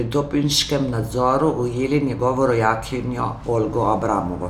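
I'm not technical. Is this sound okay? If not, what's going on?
Yes, this sound is okay, and nothing is going wrong in it.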